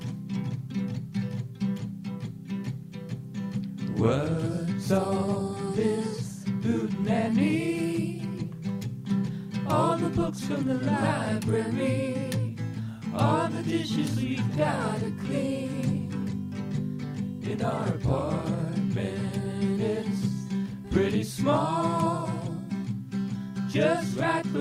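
No faults can be heard anywhere in this audio.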